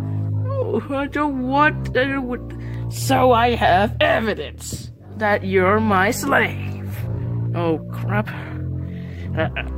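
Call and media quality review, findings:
Time-stretched section, 6.98 s to end: pace jumps to about 1.58x, pitch unchanged, rushed. Likely a stretch algorithm dropping short segments to fit length.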